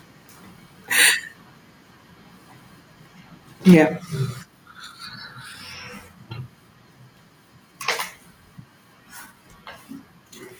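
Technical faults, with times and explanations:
3.68 to 3.80 s, microphone overload: the loudest syllable turns harsh and crackly for about a tenth of a second, its peaks flattened. The likely cause is input volume set too high, driving the signal about 2 dB past the converter's limit, clipping around 7 percent of samples.
3.74 s, microphone volume stepped down: voice and background both fall abruptly by about 3 dB in a single step, landing right on the distorted peak. This likely comes from call software detecting the overload and cutting the device's input volume at once.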